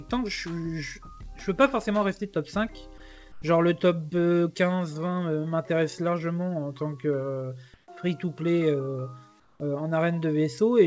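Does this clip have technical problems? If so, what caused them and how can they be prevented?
Yes. Comfort noise replaced the background three times, likely because the sender's activity detector judged those gaps silent and stopped transmitting, leaving the receiver to synthesise noise. At 3.32–3.42 s and 9.40–9.60 s the real background becomes a flat, featureless hiss about 5 dB quieter; at 7.74–7.88 s it turns about 2 dB louder. The whole clip, with nothing above 8 kHz, fits a wideband call codec. Disabling discontinuous transmission on the sending side prevents this.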